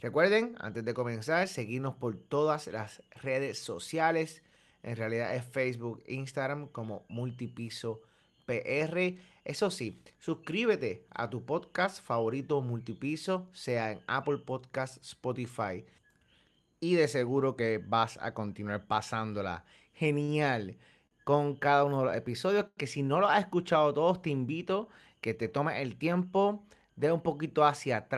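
Short stalls from a late packet occur at 20.23 s after "vas a continuar pasándola", at 21.07 s, and at 22.67 s between "uno de los episodios" and "si no lo has". Each time the jitter buffer ran dry and the last sound was held for about 48, 42 and 99 ms, so the speech briefly drags with a faint buzz. Nothing is lost.

Jitter buffer speed-up runs from 25.02 to 25.66 s, between "escuchado todos te invito" and "el tiempo de un". Pitch-period slices totalling around 70 ms were trimmed to shrink a swollen buffer, so the speech plays about 11% faster at unchanged pitch and sounds hurried.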